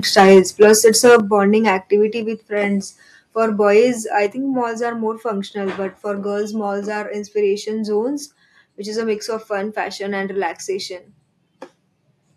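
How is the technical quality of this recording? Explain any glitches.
The recording has clear technical problems in its first few seconds: the speech starts distorted from overload, and then the level drops in several abrupt steps.

From 0.17 to 1.17 s there is microphone overload. The input was likely driven about 9 dB past what the converter could handle, so the tops of the loudest peaks are sliced off, roughly one sample in twenty. The loudest syllables sound harsh and crackly. On a waveform the peaks show as flat plateaus, and a spectrogram shows broadband smearing above the speech harmonics.

Four times the microphone volume steps down, each as a single sudden level change. This is likely the call software turning down the device's input gain after the loud, clipped start. The drops are about 2 dB at 0.2 s, about 7 dB at 1.2 s just before "activity with friends", about 3 dB at 2.22 s before "with friends", and about 4 dB at 4.26 s before "think malls are more". 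On a waveform the envelope shrinks abruptly at each point. On a spectrogram the whole picture, speech and background, dims at once.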